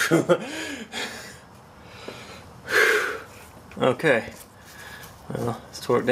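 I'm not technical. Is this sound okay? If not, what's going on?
Yes, nothing wrong turned up on listening, so it's fine as it is.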